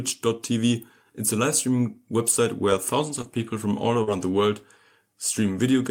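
Short concealed packet loss at 3.21 s and 4.03 s briefly smears this speech clip: about 20 ms and 40 ms of audio arrived too late, so the receiver extended the preceding sound and blended back. A lost packet rebuilt from error correction follows at 3.23 s and 4.07 s, where 20 ms each time was decoded from a low-bitrate in-band copy carried in the next packet, leaving it rougher and noisier.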